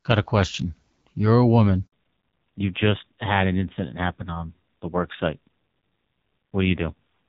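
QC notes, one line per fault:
1.86 to 1.92 s, handover gap: right after "a woman" the audio drops out for 60 ms. The call hopped from one network to another and no frames made it through during the switch, so the sound falls away fast, stays silent until the new link picks up, and anything said in between is lost.
1.92 s to the end, fallback to narrowband: from here on nothing above 4 kHz survives, and the audio turns duller and rougher. The call dropped out of HD Voice onto an older narrowband codec. The sound points to AMR-NB at around 5.9 kbit/s, down from the wideband link at about 12.65 kbit/s before the switch, which was clear with only light coding damage.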